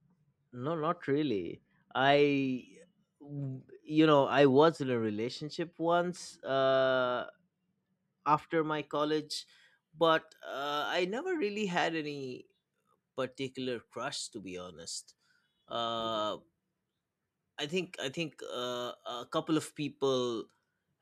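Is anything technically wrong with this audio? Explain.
Yes. From 0.0 to 8.83 s, just before "college but uh", de-emphasis is applied wrongly: an unneeded treble cut rolls off about 13 dB by 10 kHz, leaving the speech dull and muffled.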